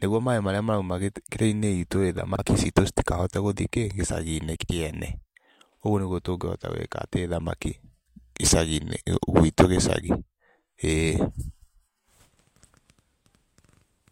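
At 2.35 to 2.42 s, between "itũ rĩ" and "citũ citikahote gũthi kĩ", and again at 4.56 to 4.69 s, frames out of order swap two adjacent 32 ms and then 64 ms blocks of speech. Each stretch sounds like a brief garbled flutter. Unlike a dropout, the speech keeps its timing and nothing goes missing.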